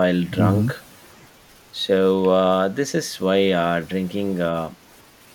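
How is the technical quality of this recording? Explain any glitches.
Nothing in the speech sounds off, so there are no glitches to explain.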